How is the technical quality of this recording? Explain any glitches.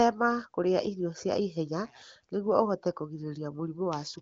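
The technical quality is good, with no glitches to explain.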